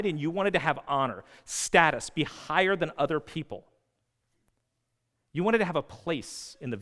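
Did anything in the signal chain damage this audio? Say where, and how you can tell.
No, nothing in the signal chain audibly damaged this speech recording. No stage, from capture through to playback, leaves any mark that can be heard.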